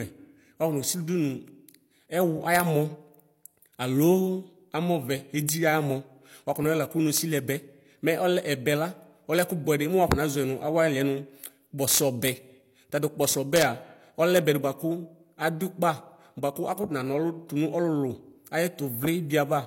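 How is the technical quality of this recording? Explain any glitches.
The speech is marred by integer overflow. Cracks occur at 2.55–2.60 s, 5.49, 7.17, 9.39, 10.12, 11.91–12.28, 13.56–13.62 and 14.37 s. Peaks only about 0 to 3 dB over full scale wrapped to the opposite sign instead of limiting, giving violent snaps far sharper than clipping's flattened buzz.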